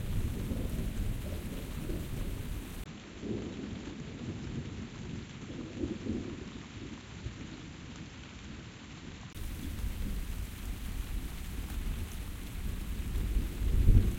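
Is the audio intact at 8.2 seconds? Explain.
No. From 2.84 to 9.35 s the input was likely switched to a poorer device, and 8.2 s falls inside that stretch. The substitute path passes a narrower band, so nothing comes through above 7.6 kHz, and it brings its own tone, level and background. The sound turns duller and drops a few decibels, a new noise floor sits well below it, and a 20 ms silence marks the switch.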